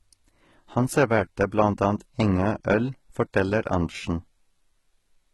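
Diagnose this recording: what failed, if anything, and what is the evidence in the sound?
Codec stage: the speech sounds gritty and lispy throughout, with nothing above 11.8 kHz. That's likely heavy HE-AAC compression, fitting roughly 16 kbps, with copied-up, mismatched treble.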